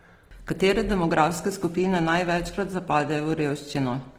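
From start to finish the speech carries plainly audible Opus compression artefacts, likely from encoding at a very low rate, which fits something near 16 kbps. The damage sounds like the music (CELT) mode: band energies are kept, but detail the encoder could not afford is filled with folded or noise-like content, so voiced sounds come across grainy and rough. The bandwidth stays full, with content reaching about 20.3 kHz, so the result is coarse rather than muffled.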